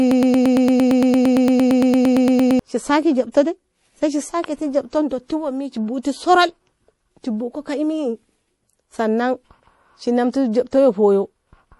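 Broken-record loop, 0.0 to 2.59 s: already under way at the start, a 114 ms fragment repeats about 22 times back to back, likely from a stalled stream, and the intended audio is lost.

Pre-echo, 3.32 to 3.34 s: a short hiss of about 26 ms comes just ahead of a sharp attack, because quantisation noise spread across the block and softened the onset.

MP3 compression, throughout: nothing is heard above 11.5 kHz and the damage is plainly audible, with watery, swirling artefacts that point to a low bitrate around 48 kbps.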